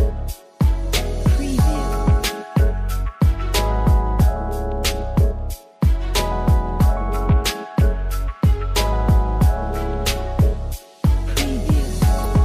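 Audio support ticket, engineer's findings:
Damaged data in compressed stream, 12.22–12.26 s. Short blip of about 44 ms near the end of the sound. Corrupted bytes in the encoded frames there; the decoder misreads those frames, loses sync and resyncs at the next valid frame header.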